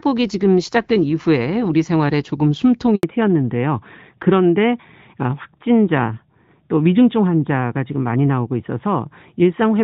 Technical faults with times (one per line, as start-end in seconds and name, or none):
2.95-3.03 handover gap
3.03-9.83 fallback to narrowband